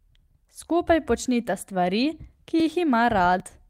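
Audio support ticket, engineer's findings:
Skip-ahead at 2.6 s, right after "počnita stvari", roughly 20 ms missing; second at 3.4 s, around 40 ms gone. Likely a dropped buffer (overrun): samples not read before overwrite. Waveform shows abrupt discontinuity, no gap; spectrogram shows thin vertical broadband line.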